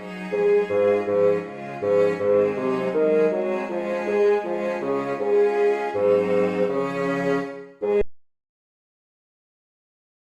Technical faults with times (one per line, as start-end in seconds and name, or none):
8.02-10.22 audio dropout to silence